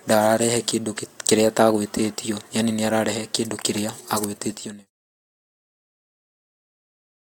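Nothing in this speech clip stands out as a fault; the level just eases gently down from around four and a half seconds until it's gone at about 4.9 s, the way an editor would finish it off.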